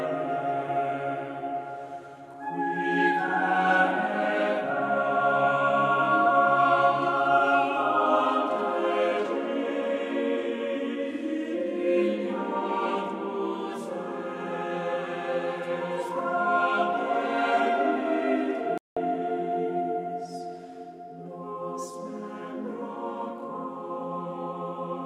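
At 18.78 s a playback stall drops the sound to silence for 189 ms, until 18.97 s, likely the player running short of buffered data.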